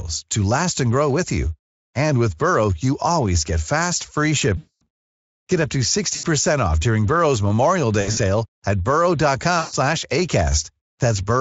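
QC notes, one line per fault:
4.57–4.83 s, 6.15–6.26 s, 8.01–8.18 s and 9.59–9.74 s: VoIP packet loss concealed by the speech codec. The Speex decoder stretches its last pitch and filter into a fading buzzy tone or coloured noise that covers about 240, 80, 120 ms (scattered) and 140 ms, and the sound stays weak briefly after each gap.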